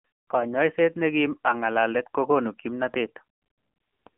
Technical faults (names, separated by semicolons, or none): AMR narrowband mobile codec